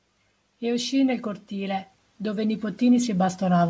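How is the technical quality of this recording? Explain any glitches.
The main issue is a level swell. From 0.6 s to the end, the automatic gain rises: AGC judged the input too quiet and kept pushing gain up, so speech and background grow louder together. The band stops at 8 kHz, which fits a wideband call codec.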